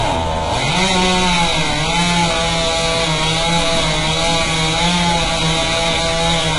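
A recording of everyday sound carries HE-AAC compression throughout, likely from a very low-bitrate encode, in keeping with about 12 kbps. The replicated treble sounds gritty and metallic, and a spectrogram shows copied, blocky upper bands stopping dead at 11.1 kHz.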